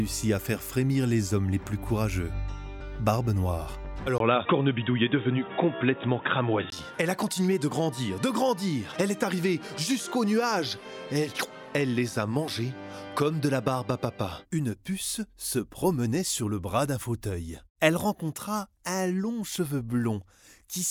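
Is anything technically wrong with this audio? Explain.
Yes. From 4.18 to 6.72 s, a brief 20 ms gap leads into dull, boxy sound cut off above 3.8 kHz with new faint background noise, likely an input switched to a poorer device rather than a filter, since new noise appears while level stays unchanged.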